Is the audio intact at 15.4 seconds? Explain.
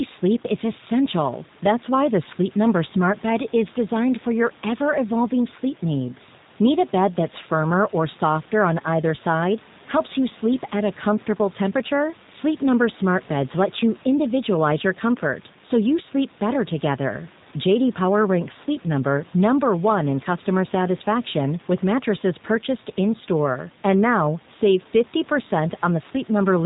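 No. At 15.4 s the speech carries G.729 codec damage present throughout: rebuilt at 8 kbit/s from a filter and pulses, with nothing above 4 kHz, it sounds plainly rough and synthetic.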